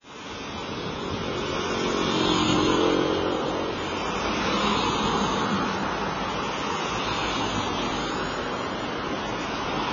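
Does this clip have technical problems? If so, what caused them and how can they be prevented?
Yes. Heavy AAC compression damage runs through the whole clip, most likely from AAC-LC encoding at a very low bitrate; the dullness fits roughly 16 kbps. To save bits, the encoder has discarded everything above 7 kHz and coarsely quantised what remains, so the audio sounds dull and smeared, with a watery, warbling texture on sustained sound. A spectrogram would show a hard ceiling at 7 kHz, patchy gaps and blocky time-frequency smearing below it. Prevent this by encoding from the original source at 96 kbps or more, or by keeping a lossless copy.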